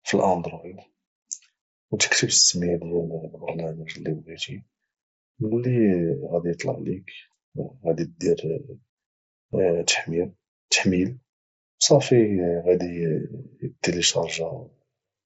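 At 9.52 s there is a single instance of concealed Bluetooth headset packet loss. About 7.5 ms of the speech stream, consistent with one lost frame, was replaced by a repeat of the best-matching recent stretch of waveform. It is almost inaudible. On the waveform the gap has no dropout but shows a short copied cycle pattern. On the spectrogram the harmonics are briefly held steady under the mSBC codec's 8 kHz ceiling.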